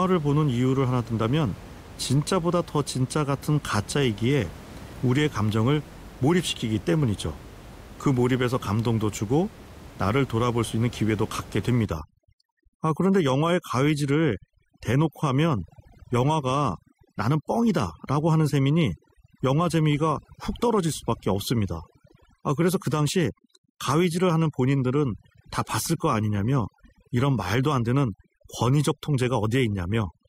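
Overdone noise removal sets in at 11.86 s and lasts to the end of the clip at 30.28 s. Before that point the room noise sits about 20 dB below the speech. From 11.86 s a noise reducer pushed too hard cuts frequency bands deep or off wherever they come near its noise estimate. The background drops and breaks up into twinkling specks, and the quieter parts of the voice are stripped away with it.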